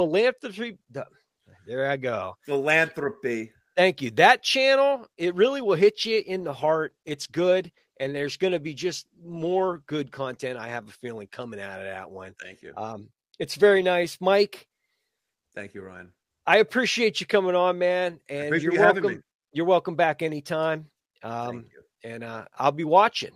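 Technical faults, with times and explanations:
5.22–10.35 s, call bitrate drop: the speech turns rougher and more smeared for about 5 seconds, consistent with a fall from about 32 to 16 kbps. With the bandwidth estimate reduced, the encoder spends fewer bits, coding the signal coarsely until the rate recovers.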